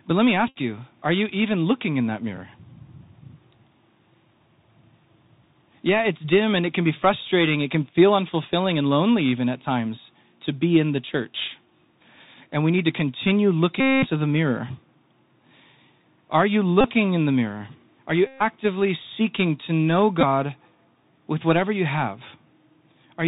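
Throughout, the Bluetooth CVSD headset codec limits the speech to narrowband. The adaptive one-bit steps can't keep pace with loud, sharp sounds, so sibilants turn scratchy over a granular hiss. A Bluetooth headset packet repeated fault recurs at 0.48 to 0.56 s, after "let me"; 13.80 to 14.07 s, after "we need to continue"; 16.81 to 16.90 s, before "in the mirror"; 18.27 to 18.42 s; and 20.21 s. Each time, lost packets were replaced by the previous one, so the runs buzz near 267 Hz.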